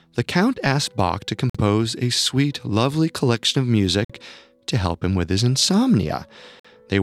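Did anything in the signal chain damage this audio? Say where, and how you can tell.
Yes. A gap between chunks, likely from codec padding or a player that starts each 2.5 s block of speech late, leaving regular 50 ms silences at 1.50, 4.05 and 6.60 s.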